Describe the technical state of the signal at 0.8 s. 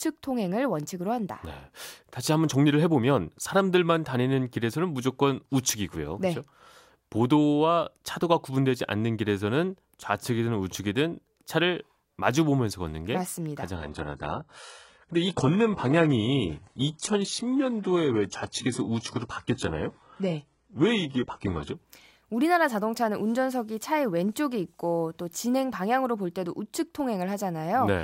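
At 0.8 s the speech signal is intact, with no dropout, distortion or other fault audible at that moment.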